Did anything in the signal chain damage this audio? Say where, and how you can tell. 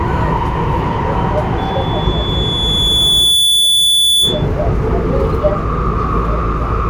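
Yes. A loudspeaker feedback squeal in the acoustic and analogue path appears from 1.58 to 4.47 s: a steady 3.4 kHz tone swells over about two seconds to roughly 5 dB above the sounds. The microphone is re-amplifying its own loudspeaker, with loop gain exceeding unity at that frequency.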